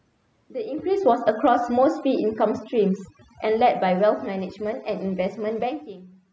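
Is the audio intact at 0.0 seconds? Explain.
No. Overdone noise removal runs from 0.0 s through the whole clip: an over-strong noise reducer pushes any frequency band near its noise estimate far down, taking soft speech detail with it, so the background drops and breaks up into twinkling specks.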